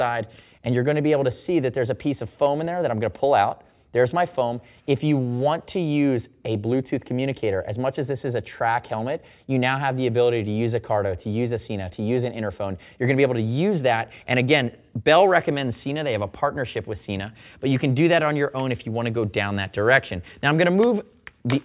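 No technical faults are audible.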